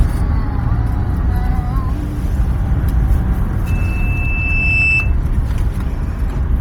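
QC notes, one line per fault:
throughout: Bluetooth LC3 compression, heavy. The sound has a breathy, grainy edge, with the upper spectrum replaced by a hiss-like noise fill rather than real detail, while content still reaches up to about 20.2 kHz. The damage is likely from the LC3 codec at a low rate. The smearing fits 10 ms transform frames and a rate near 32 kbps. Unlike a plain low-pass or narrowband channel, the top end is still present, but as texture-less noise.
3.66–5.16 s: loudspeaker feedback squeal. A single steady tone at 2.6 kHz swells over roughly a second until it sits about 5 dB above the rest of the audio, then stops at 5.16 s. The microphone was picking up its own loudspeaker, and at that one frequency the loop gain passed unity, so the tone fed itself. Its fixed pitch and self-sustaining build-up distinguish it from a test tone or a whistle in the recorded scene.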